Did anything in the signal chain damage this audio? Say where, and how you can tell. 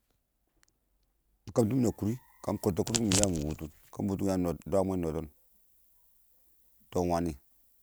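Yes. From 1.59 s to the end at 7.83 s, pre-emphasis was left on: the speech turns thin, bright and sibilant, with treble about 13 dB hotter at 10 kHz than at 1 kHz. That matches an FM 75 µs boost whose de-emphasis stage was skipped.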